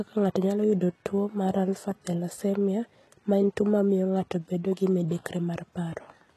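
From start to finish the speech carries heavy coding damage of the kind HE-AAC compression leaves. Sibilants sound gritty and lisped, and the upper register has a metallic sheen whose harmonics don't follow the ones below. That points to treble likely rebuilt by spectral band replication from copied lower bands, which fits a very low bitrate near 16 kbps. A spectrogram shows smeared, repeated-looking texture in the highs and a hard ceiling at about 12.3 kHz, with nothing above.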